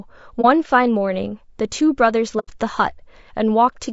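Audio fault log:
Throughout: low-delay AAC compression. The speech sounds rough and grainy, with noise filling the gaps between harmonics and a thin, synthetic top band. Short codec frames resolve pitch poorly. This is likely AAC-ELD, and the damage fits a low bitrate of about 32 kbps.
0.41–0.46 s and 2.39–2.50 s: AAC frame loss with muting. The speech dips briefly for about 30 ms and then drops into a soft-edged hole of about 90 ms. Overlapping windows fade across the zeroed spectrum. The gaps fit one and then three lost frames.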